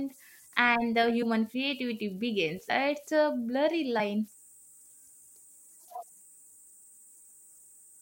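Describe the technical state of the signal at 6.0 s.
Compressed frames skipped at 6.02 s: the decoder never plays a short run of frames, so the speech lurches forward by roughly 70 ms, consistent with about three 21.3 ms frames.

Converter idle tones run under this moment too. An undithered delta-sigma converter locks into repeating bit patterns on small input, producing a tone around 7 kHz and grainy noise, sitting about 28 dB below the speech.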